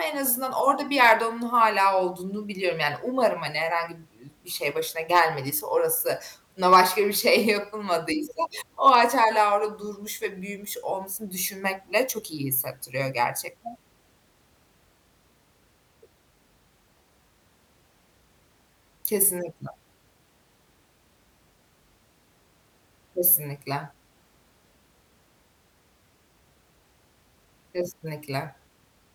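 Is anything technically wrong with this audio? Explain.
Yes, the speech has hard clipping in four short bursts, at 1.02–1.12 s (after "en az orada bir"), 5.15–5.20 s, 6.73–6.80 s and 8.87–9.24 s (before "orada durmuş ve büyümüş"). Peaks overran a stage by about 2 to 4 dB and were sliced flat, giving brief crackle rather than the smooth thickening of soft saturation.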